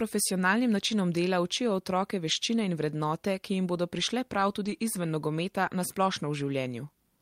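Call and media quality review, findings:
Lost packet rebuilt from error correction, speech, at 2.27–2.33 s, 4.65–4.75 s and 5.65 s. No gap, but brief rough, noisy patches lasting about 60 ms, 100 ms and 20 ms, with two, three and one 20 ms packets rebuilt (40, 60 and 20 ms). Likely component: Opus decoder playing the low-bitrate in-band FEC copy carried by the next packet. Waveform stays continuous with a grainier envelope. Spectrogram shows short smeared, noisier blocks with blurred harmonics at those times.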